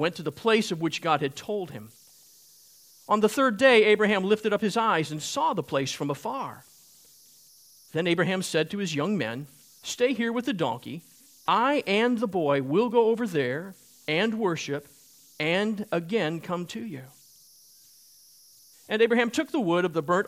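An undithered delta-sigma converter falls into repeating bit patterns on quiet input, leaving converter idle tones near 5 kHz, about 33 dB below the speech, throughout.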